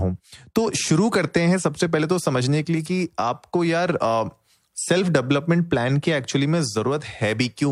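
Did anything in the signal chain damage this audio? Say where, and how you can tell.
No, no signal-chain damage audible.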